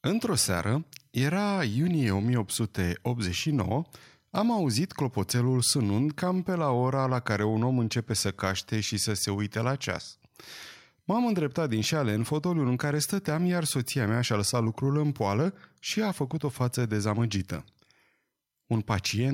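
No technical faults are audible anywhere in the recording.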